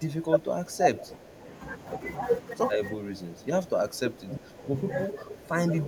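An echo canceller likely mistook overlapping talk for echo, suppressing speech in double talk: from 0.0 to 1.47 s it dips about 10 dB, then from 2.94 to 5.88 s about 15 dB.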